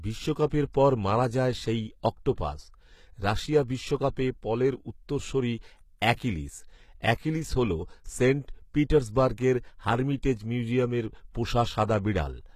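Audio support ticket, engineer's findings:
HE-AAC compression, whole clip: treble sounds synthetic, s sounds gritty and lispy, harmonics up top don't line up with the band below. Likely an HE-AAC encode; the plainly audible damage fits a low bitrate, around 20 kbps. Upper band rebuilt by copying lower bands upward under a coarse envelope, so it's bright but not the real thing.

Pre-echo at 0.73 s: brief hiss ahead of a sharp attack, about 15 ms of it, onset a bit soft and smeared. Transform codec block spreading quantisation noise evenly, so noise sized for the loud attack leaks into the quiet bit just before it. Same encoder as above, most probably.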